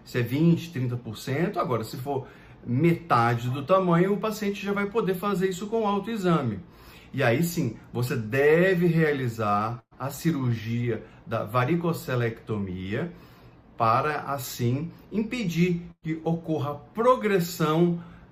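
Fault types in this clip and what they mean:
burst of packet loss: 120 ms vanishes at 9.79 s and 15.91 s, bridged by a fading held sound shown as smeared spectrogram bands, then a 50 ms flat gap.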